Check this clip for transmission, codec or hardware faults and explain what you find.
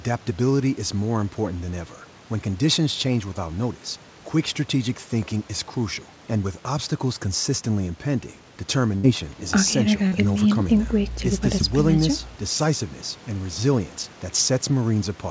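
Two packet-loss faults stand out in this speech, heard over a call path whose band ends at 8 kHz, which points to G.722.

Burst of packet loss, 8.96 to 9.06 s: about 74 ms of invented continuation fades as a held buzz or hiss, and roughly 80 ms of real audio is skipped.

Short concealed packet loss, 10.07 to 10.15 s: the receiver patches about 44 ms by extending the last sound, giving a brief smear where around 40 ms went missing.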